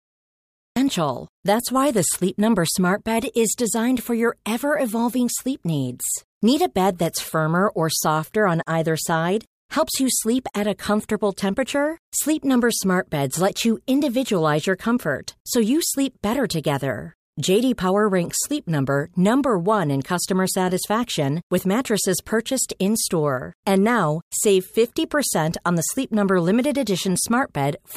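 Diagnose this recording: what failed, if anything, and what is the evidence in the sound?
What failed is a cut-off start, at the capture or recording-start stage. The file sits in dead digital silence until about 0.76 s, then the speech jumps in mid-sound with no natural attack or fade-in, because recording began late and caught the talker partway through.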